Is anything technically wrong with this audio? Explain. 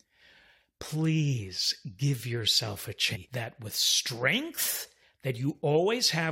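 Yes. From 3.15 to 3.17 s there is a stream segment skipped, likely because one chunk of the segmented stream failed to load and playback went on with the next. In the sound, the speech jumps abruptly ahead with a brief blip, and a stretch of the programme is missing.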